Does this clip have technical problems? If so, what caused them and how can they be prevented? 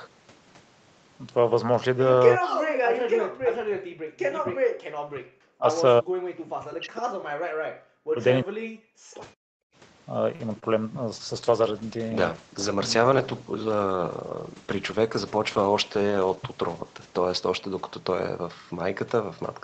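Yes. There are five kinds of fault.

Speech suppressed in double talk occurs at 2.38–2.56, 2.91–5.66, 6.00–6.26, 6.50–7.25, 7.86–8.22 and 8.44–9.27 s. The speech sinks by up to around 40 dB or breaks into fragments. The likely cause is an echo canceller mistaking local speech for loudspeaker echo while both sides talk. Better double-talk detection in the canceller, or a headset, would prevent this.

Background gated by the echo canceller appears at 7.53–7.58 s and 9.55–9.75 s. The room sound drops by about 40 dB for a moment, then returns. The canceller clamped the microphone while the loudspeaker played. Gentler suppression settings would keep the background steady.

A short stall from a late packet occurs at 10.35–10.42 s. The sound is held for about 42 ms while the jitter buffer waits, and nothing is lost. The packet arrived late and the buffer ran dry. A deeper or more adaptive jitter buffer would prevent this.

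A short concealed packet loss follows at 10.60–10.64 s. About 20 ms of audio never arrived. The receiver filled the gap by extending the previous sound, which leaves a brief smear. Forward error correction or a more stable network would prevent this.

A call bitrate drop starts at 11.14 s and lasts to the end. Opus falls from 40 to 10 kbps and stays at the lowest rate for about 5.9 s. The sound turns rough and watery because a falling bandwidth estimate starved the encoder. More reliable uplink bandwidth, or a higher minimum bitrate, would prevent this.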